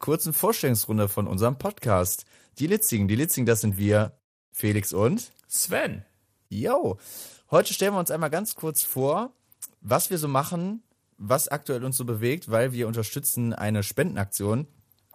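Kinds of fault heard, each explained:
Bluetooth SBC bit pool drop: The wireless link could not keep up, so the encoder cut the bits given to each frame. The highest sub-bands got few or none, and the rest were quantised coarsely. The speech turns dull and gritty from 1.7 to 5.3 s, from 7.2 to 11.1 s, and from 14.2 s to the end. The loss fits a bit pool falling from 31 to 11, near 83 kbps.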